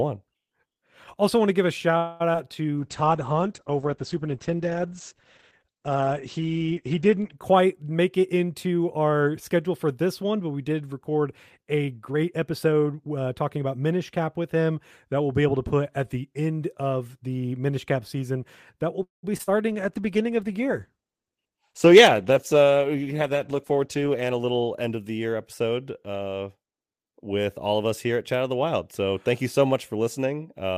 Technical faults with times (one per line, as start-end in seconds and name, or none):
1.97-2.22 call audio freeze
2.33-2.36 short concealed packet loss
2.77-7.44 call bitrate drop
12.08-13.92 jitter buffer speed-up
19.03-19.25 call audio freeze
19.37-19.49 short concealed packet loss
19.68-25.87 call bitrate drop
23.51-24.41 jitter buffer speed-up